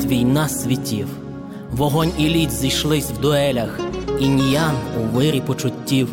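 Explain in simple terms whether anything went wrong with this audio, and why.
Nothing went wrong here: no fault can be heard anywhere in the recording.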